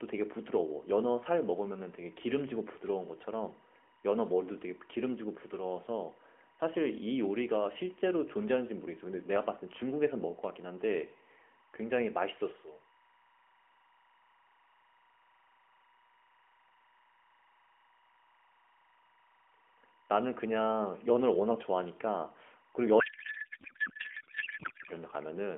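Speech heard through a narrowband AMR mobile path carries timecode bleed for its whole length: a faint chirping warble flipping between pitches near 1 and 2 kHz, some 35 dB under the speech, with a rhythm matching 23.976-frame code. Unlike a hum or single-tone whistle, it keeps alternating between two pitches and never follows the speech. From 22.99 to 24.91 s a codec payload misread takes over. The octet-aligned AMR stream is being unpacked as bandwidth-efficient, so the speech turns to garbled noise and warble that barely tracks it. Unlike ordinary packet loss, there are no gaps or repeated fragments.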